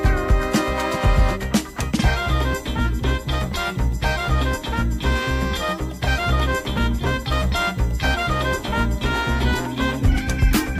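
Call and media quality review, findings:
USB whine, throughout the clip. A fixed-pitch tone at 1 kHz, strongest at its 2 kHz harmonic, roughly 30 dB below the signal. Probable component: the USB audio device or its host port and supply. Mechanism: current drawn in 1 ms bus frames modulates power or ground and leaks into the analogue path as a steady whine. Check: supply isolation, ground separation, a powered hub or a ferrite on the cable.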